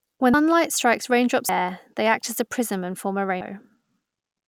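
At 0.34, 1.49 and 3.41 s, compressed frames are skipped. The speech jumps ahead by about a fifth of a second, about two fifths of a second, then a fifth, in steps that fit a 32 ms frame.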